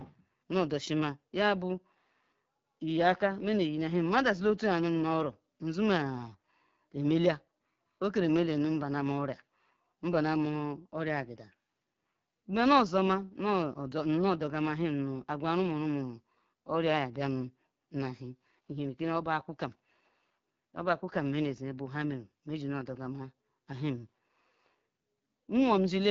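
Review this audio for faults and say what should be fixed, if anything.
The speech carries AMR wideband (HD Voice) codec damage throughout. It sounds rough and raspy, which fits a low rate near 8.85 kbit/s. The model codes detail only up to 6.4 kHz. Shaped noise fills the band above, and nothing reaches past 7.5 kHz. Sending the call at 12.65 kbit/s or higher would prevent this.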